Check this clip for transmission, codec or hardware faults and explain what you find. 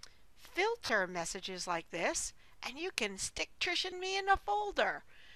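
Two short dropouts of lost LE Audio frames occur, at 0.86 to 0.89 s and at 3.91 s. The Bluetooth LE Audio link failed to deliver frames, so the LC3 decoder filled each gap by repeating the last good spectrum with randomised signs. The first gap lasts 30 ms, which fits four lost frames. The second lasts 15 ms, pointing to two. In both, the sound briefly turns into a noisy smear in place of its normal detail.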